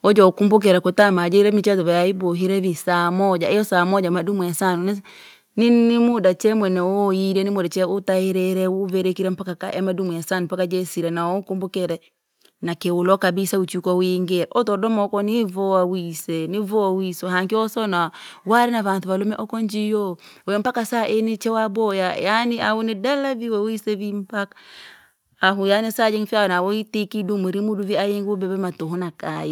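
Microphone overload at 1.00 to 1.02 s, between "wojo ukumbukira" and "jira nchezo": a brief harsh crackle on the peak, which runs about 1 dB past the converter's limit with a small fraction of samples flattened. The likely cause is input gain set high enough that the converter clipped the waveform tops.

Microphone volume stepped down at 1.02 s, right after that peak: the sound and its background drop together by about 2 dB in a single step. This is likely the call software reacting to the clipping by lowering the device's input level at once.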